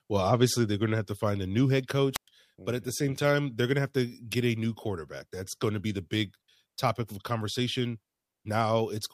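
At 2.13 s, just after "find a new head", this speech clip suffers a wireless microphone squelch dropout: the radio link faded, and the receiver muted for about 115 ms before speech resumed at "but at the same".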